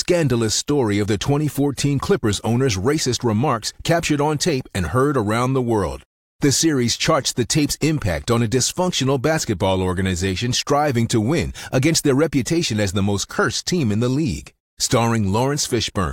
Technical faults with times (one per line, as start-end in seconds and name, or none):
none